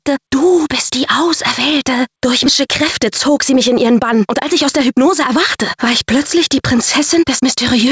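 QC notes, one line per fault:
2.46–2.48 s, skip ahead: roughly 0.4 s of queued audio was dropped, so playback leaps forward and the two sides butt together with no filled gap.
2.67–5.34 s, jitter buffer speed-up: the buffer trimmed repeated pitch-period slices, shedding about 150 ms, so the sound runs 105% fast at unchanged pitch and feels slightly hurried.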